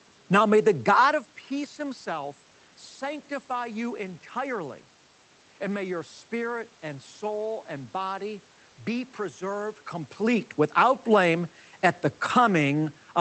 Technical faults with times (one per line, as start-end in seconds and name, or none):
none